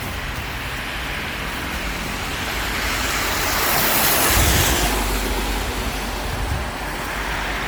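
Generation loss runs through the whole recording. The sound is swirly and smeared, with a hollow, phasey quality. Attacks lose their edge and blur. The damage is heavier than a single MP3 pass would leave. It fits audio that was likely decoded and re-encoded about five times at around 96 kbit/s. Each pass quantised on a shifted frame grid, so noise and spectral holes piled up. Nothing remains above 20.1 kHz.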